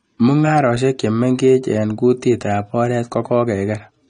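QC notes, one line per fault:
Throughout: AAC compression. The speech has a hard ceiling with nothing above 9.8 kHz, so it sounds dull and closed-in, and the damage is plainly audible rather than subtle. Sibilants come out smeared and fizzy, with a warble on held sounds. That's the likely cause: an AAC-LC encode at a low rate, which fits something like 32 kbps, where the encoder drops the top band and coarsely quantises what's left.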